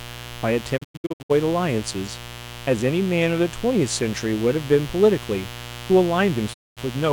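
Switching spikes from a 60 Hz mains supply leak into the signal throughout, producing a steady, raspy mains buzz roughly 15 dB below the speech. Between 0.76 and 1.32 s the receiver loses the digital broadcast, and the dropout mutes the speech in short 20 ms fades, leaving scattered holes totalling 352 ms (the longest 96 ms). At 6.52 to 6.79 s it mutes again for 224 ms.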